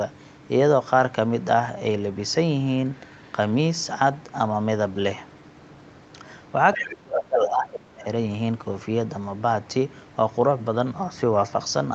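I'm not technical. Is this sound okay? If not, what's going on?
No. From 6.74 to 6.95 s a faint second voice slips in under the main speech: the other side's voice leaking through, likely from a loudspeaker echo the call didn't fully cancel. From 6.77 to 8.06 s the main voice sinks sharply. That's speech suppressed in double talk, likely because both sides spoke at once and the call turned everything down.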